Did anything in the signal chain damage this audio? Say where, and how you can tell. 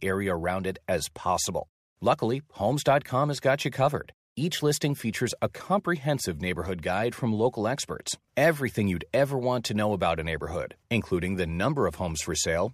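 No, nothing in this speech recording stood out on listening as damage from any stage of the signal chain.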